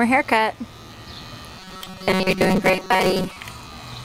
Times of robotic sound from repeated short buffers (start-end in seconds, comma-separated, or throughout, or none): 1.59-3.37